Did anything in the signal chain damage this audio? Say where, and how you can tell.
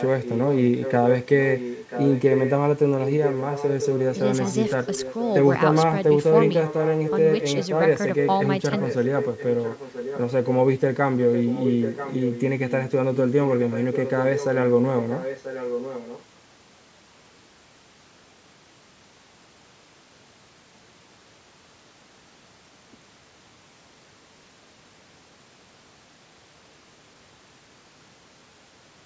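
Yes. At the call-processing stage, an echo leak likely came from an echo canceller that let the far end's loudspeaker pickup through. A copy of the speech returns 986 ms late, about 5 to 10 dB below it, at 0 to 0.93, 1.28 to 2.53, 3.01 to 4.15, 4.49 to 5.34, 6.46 to 7.67, 8.25 to 10.51 and 11.19 to 16.24 s.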